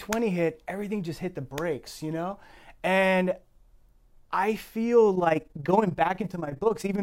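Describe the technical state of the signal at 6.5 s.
At 6.5 s the speech is affected by overlap-add ripple, which runs from 5.16 s to the end of the clip at 7.03 s. The windowed frames were rejoined with an overlap whose gains don't sum evenly, so the level dips and swells by about 11 dB once per frame, around 20 times a second. It sounds like a rough flutter. The waveform envelope shows regular scalloping, and a spectrogram shows evenly spaced vertical banding across all frequencies.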